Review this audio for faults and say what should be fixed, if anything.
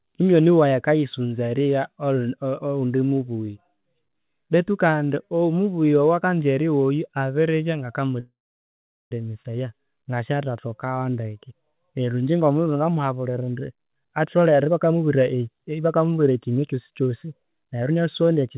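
At 8.2 s there's a call audio freeze lasting about 0.91 s. The last bit of sound smears into a fading buzz, then about 0.77 s of silence, and the audio picks up where it left off, with nothing lost. The likely cause is packets stalling in transit until the jitter buffer ran dry. A larger or more adaptive jitter buffer, plus a network path with fewer delay spikes, would keep that from happening.

From 13.39 s to the end at 18.57 s there's a jitter buffer speed-up. The speech runs at about 110% speed with the pitch unchanged, so it sounds a bit rushed. The receiver is trimming repeated pitch-period slices, roughly half a second in all, to drain a backlog of buffered audio. Gentler, slower catch-up settings would avoid the hurried stretch.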